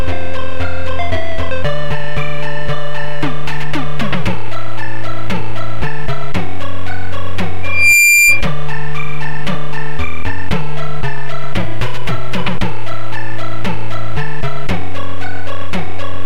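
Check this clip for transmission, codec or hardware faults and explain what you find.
Loudspeaker feedback squeal runs from 7.63 to 8.47 s: a microphone was picking up the loudspeaker it fed, and at 2.4 kHz the loop gain exceeded one. That tone swells over about a third of a second into a squeal roughly as loud as the surrounding sound.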